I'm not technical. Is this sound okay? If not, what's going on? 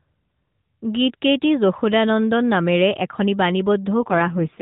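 No. An AMR rate drop starts at 3.98 s and lasts until the end at 4.61 s. On a weak mobile link, the phone codec spends fewer bits on the speech itself and more on protection, so the speech turns rougher and more synthetic, without any gap.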